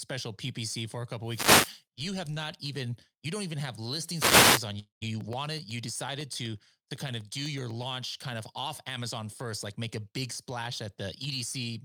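From 1.23 to 1.82 s, just after "for a" and before "you have not even", a wireless microphone noise hit sounds as a short swish of static. The analogue FM radio signal faded as reflections cancelled, so receiver noise rose over the speech. A second hit follows "you don't even have", from 4.11 to 4.68 s.

From 4.79 to 5.03 s, the sound smears into a fading buzz, then drops to silence for about a tenth of a second. Speech resumes with roughly 0.22 s missing. This pattern points to a long network dropout as the likely cause.

From 5.21 to 8.46 s, regular ticks cut through the speech every 0.125 s. These are periodic USB or driver dropouts. A background task blocked the audio path at a fixed interval, and each time around a millisecond of sound was replaced by silence, about thirty times in all.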